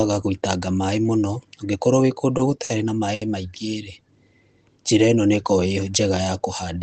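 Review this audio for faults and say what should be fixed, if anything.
Three short stalls from a late packet occur: at 2.37–2.40 s and 2.64–2.70 s, both shortly after "mũno ũngĩkorwo wĩ kũndũ", and at 3.14–3.22 s. Each time the jitter buffer ran empty, so the receiver stretched the last sound by 20, 50 and 70 ms, then resumed where it had stopped, with nothing lost. On a spectrogram the harmonics freeze into smeared horizontal bands for those spans. The waveform shows a repeated, slightly dipping cycle. A deeper or more adaptive jitter buffer, or a steadier network path, would prevent these stalls.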